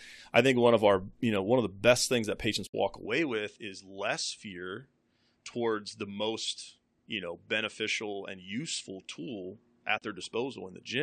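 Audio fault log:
2.67–2.74 s and 9.98–10.02 s: AAC frame loss with muting. The decoder lost frames and zeroed their spectrum, so the speech fades out and back in over overlapping windows, leaving soft-edged 70 ms and 40 ms holes. The first comes just after "best things that patients."
3.06 s to the end: input switched to a poorer device. The recording likely moved to a lesser microphone, and with no gap the speech becomes duller and a few dB quieter, with nothing above 8.9 kHz and a faint new background noise far below the voice.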